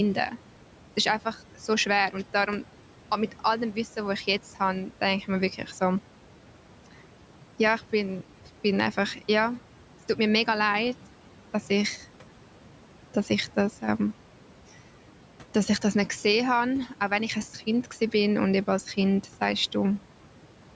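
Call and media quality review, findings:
Noise suppressor artifacts, throughout: background noise drops about 12 dB in gaps between words and returns under speech. Per-frame band gain pumping. Spectrogram shows noise floor darkening between utterances and re-filling beneath them; waveform gaps visibly quieter. Room noise sits about 17 dB below speech; nothing above 8 kHz from call mic processing.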